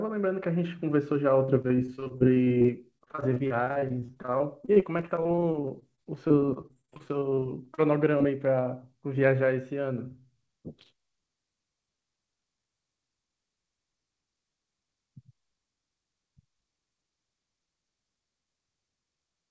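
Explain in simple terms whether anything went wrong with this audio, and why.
From about 1.46 to 8.22 s there's repeated packet loss, the robotic sound: dozens of short dropouts, none longer than about 40 ms, where bits of the call went missing and were patched by stretching the previous sound. That leaves the speech choppy for roughly a fifth of that stretch.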